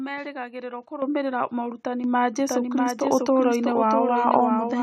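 The call software judged the microphone too quiet and raised its input volume in single steps, so the microphone volume stepped up. At 1.02 s, just before "morutani ma", voice and background jump together by about 9 dB, then by about 6 dB at 2.04 s. From 2.40 s, just after "morutani ma", a doubled audio track begins. A second copy of the signal, likely captured again through a slower path, enters abruptly and runs to the end. It trails by roughly 0.7 s at about 5 dB below the original, full-band and dry, with no decay or room colour. At 3.06 s the microphone steps up once more, by about 3 dB, lifting both the voice and background again.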